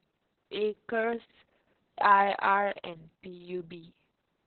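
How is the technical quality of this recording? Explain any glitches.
Technical quality is poor, with heavy codec damage across the whole recording. Opus voice compression runs throughout: the speech has been squeezed through the SILK voice coder in narrowband mode, leaving nothing above 4.3 kHz, and the excitation is coded so coarsely that the speech sounds muffled, hoarse and slightly robotic, which fits a very low bitrate of around 6 kbps.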